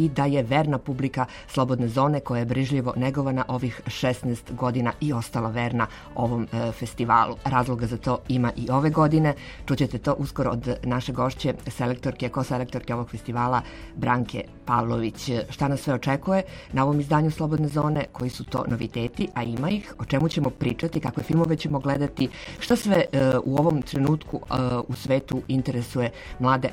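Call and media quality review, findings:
Periodic USB or driver dropouts, 17.57 to 25.45 s. Regular ticks at a fixed 0.125 s spacing, eight per second, around seventy in all. Each is a gap of roughly 10 ms filled with silence. Probable component: USB audio path or driver, stalled by a background task on a fixed timer. Distinguished from network packet loss or random buffer underruns by the strict, metronome-like spacing; those produce irregular gaps.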